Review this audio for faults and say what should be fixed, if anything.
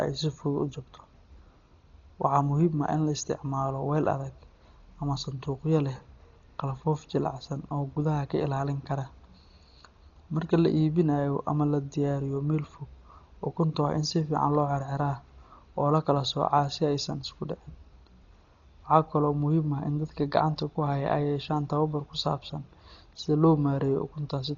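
Throughout the speech, nothing is heard above 6.9 kHz, and tonal parts carry a rough, fluttering noise. This is likely heavy Dolby Digital compression. The band limit and damage point to a rate near 32 kbps, where the encoder narrows the band and gives many frequency lines no mantissa bits, so the decoder fills them with dither noise. To prevent it, encode from the original source at a substantially higher bitrate, or distribute a lossless copy.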